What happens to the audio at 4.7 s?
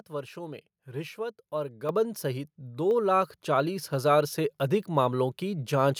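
Nothing goes wrong at 4.7 s; the speech carries on intact through that moment, with no dropout, click or distortion.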